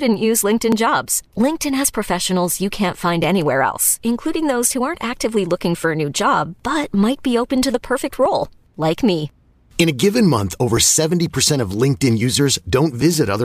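From 0.72 s to 13.27 s, a click lands every 2.51 s under the speech. The spacing stays steady across the clip, about seven clicks in all. This regularity points to clock drift buffer slips. Two devices likely run on separate clocks that disagree by roughly 500 parts per million. The buffer between them slowly drifts until a short block, somewhere near 70 samples, is dropped or repeated. Each slip breaks the waveform and produces the tick.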